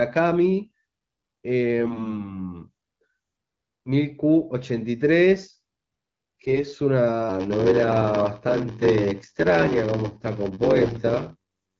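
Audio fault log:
1.80–2.31 s, 6.45–6.62 s and 10.79–11.00 s: AMR bit errors. Bursts of flipped bits, a few percent of them, corrupt the weakly protected parts of the AMR-WB frames. Misplaced excitation pulses and wrong fine pitch, gain and spectral values make the sound hoarse, scratchy and gargly at roughly unchanged pitch and level.
7.29–11.79 s: block size mismatch (padded). A stage writes shorter blocks than the next stage reads, which fits a 512-sample read, and zero-pads the remainder. The repeated gaps produce a buzz at 93.8 Hz, and the audio plays at 0.861× speed with timbre unchanged.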